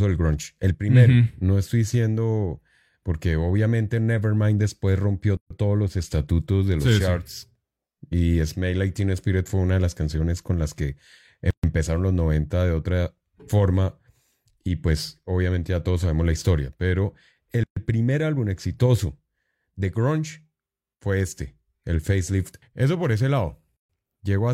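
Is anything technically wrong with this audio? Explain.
Yes: a gap at a join of encoded pieces at 5.37, 11.51, 17.64 and 23.77 s. These are roughly 130 ms silences from untrimmed encoder padding. Unlike dropouts, they recur every 6 s and resume without losing sound.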